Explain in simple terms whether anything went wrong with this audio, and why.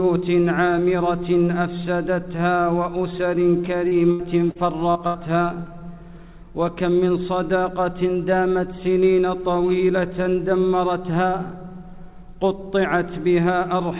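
Yes, there's a rough patch from about 3.88 to 5.17 s: repeated packet loss, the robotic sound kind. Five chunks went missing in quick succession, the longest about 80 ms. Each gap was patched by stretching the previous sound, so that stretch sounds choppy, with pieces missing.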